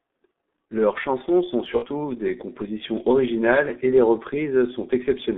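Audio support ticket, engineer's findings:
G.723.1 codec, entire clip. Speech muffled and hoarse. Consonants smeared. Band limited to roughly 200 Hz to 3.6 kHz, nothing above. Heavy coding damage at about 6.3 kbit/s. Probable component: low-rate telephony encoder. Mechanism: coarse 30 ms frames, slow-updating vocal model, fine detail discarded.

VoIP packet loss concealed by the speech codec, 1.76 to 1.87 s. Between "chansons sont" and "des compositions originales et". Sound stretches into a fading buzzy tone or coloured noise. Weak or distorted onset after. Gap near 60 ms, which fits two lost 30 ms frames. Probable component: network path plus decoder concealment. Mechanism: decoder repeats last pitch and filter, lowering gain. Recovery lags because each frame builds on the last.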